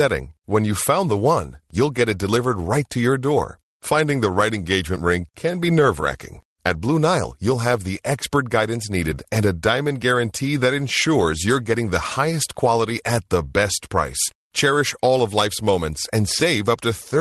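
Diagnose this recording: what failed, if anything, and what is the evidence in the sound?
Nothing in the recording points to a failure at any stage: the speech reaches the listener through a call path whose codec caps the top end at around 12 kHz, which is normal behaviour for that path.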